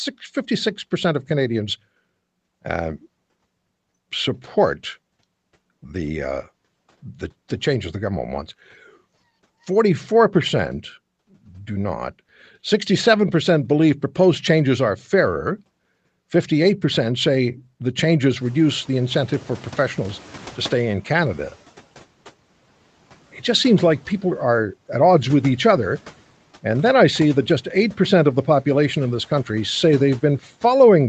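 Just after "say the changes", at 18.41 s, the room noise jumps by about 20 dB and the noise suppressor catches up only gradually. Its noise estimate lags the new level, so the noise comes through with less reduction at first, then sinks by about 8 dB over 3.17 s until 21.58 s. Unlike gating or pumping, the level does not swing with the speech. It glides down once and then holds steady.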